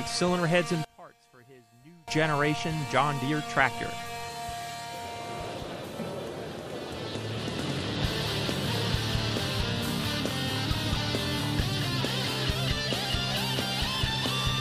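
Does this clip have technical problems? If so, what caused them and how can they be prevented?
Yes. From 0.85 to 2.08 s, one channel was likely inverted in polarity, so the shared content cancels in the mono sum and the level drops by about 27 dB, leaving only a faint residue of the inter-channel difference. Checking polarity on every stereo leg before summing prevents it.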